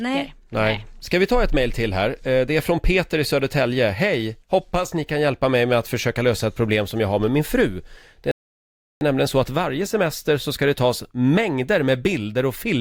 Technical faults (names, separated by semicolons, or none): rebuffering stall